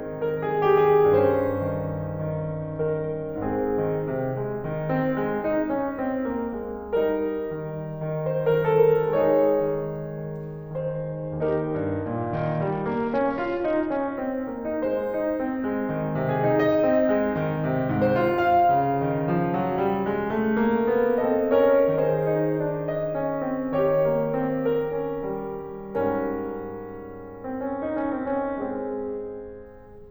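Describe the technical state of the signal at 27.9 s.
At 27.9 s the music is inside a Bluetooth SBC bit pool drop that runs from 27.66 s to 29.66 s. The link appears to have come under pressure, and the encoder cut its bit budget sharply, which fits a fall from a bit pool around 31 to about 8, near 66 kbps. The highest sub-bands are starved of bits and the rest are coarsely quantised, so the treble goes dull and a gritty noise rides on the music until the rate recovers.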